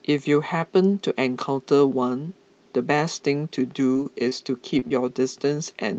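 Short concealed packet loss hits the speech five times in a tight cluster at 3.93, 4.03, 4.29, 4.79 and 4.88 s. Each time, roughly 20 ms of audio went missing, and the receiver patched the gap by extending the previous sound for 15 to 24 ms before easing back in. The one at 4.79 s also stretches things by a few extra milliseconds. You hear them as quick smears or little wobbles, all on a band-limited call sound from the Opus codec that tops out around 8 kHz.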